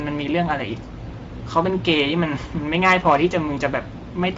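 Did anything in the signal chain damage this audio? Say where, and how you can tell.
Yes. The Speex codec damaged the speech throughout. It sounds hoarse and noisy, consistent with a bitrate of 16.8 kbps, and there is nothing above 7.7 kHz.

Hard clipping from 2.74 to 3.16 s: a converter or gain stage was overdriven by about 6 dB, flattening the peaks and adding harmonics far up the spectrum.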